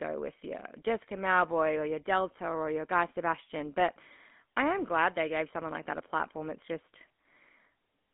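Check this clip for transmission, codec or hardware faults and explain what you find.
The whole clip has been through the GSM full-rate codec, and it's plainly audible from start to finish. This is the old mobile-phone codec. It models the speaker's vocal tract as a filter and drives it with a coarse train of regularly spaced pulses, so the fine detail of the excitation is thrown away. That's where the buzzy, gravelly roughness on the speech comes from, and it sounds like a 13 kbps stream. The band is also squeezed to roughly 200 Hz to 3.5 kHz, so the speech comes across thin and boxy with no real sparkle up top.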